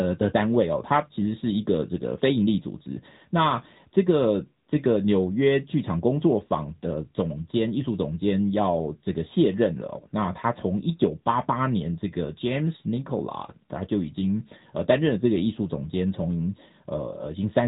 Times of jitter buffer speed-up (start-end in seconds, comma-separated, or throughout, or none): none